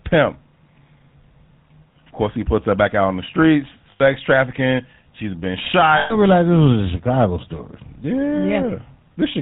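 The whole clip carries the sound of the GSM full-rate codec, which fits a 13 kbps coder. It models the vocal tract and drives it with sparse, regularly spaced excitation pulses, and it cuts everything above 4 kHz. The result is a plainly audible buzzy, gravelly roughness over the speech.

There are lost GSM frames at 3.92 to 4.01 s, just after "out on the streets", and at 5.98 to 6.15 s, between "been shot" and "realize this was". The first gap is 80 ms and the second is 120 ms, which fits four and six 20 ms frames. The decoder repeats the last good frame, so each gap sounds like a rough, metallic ring that replaces the speech.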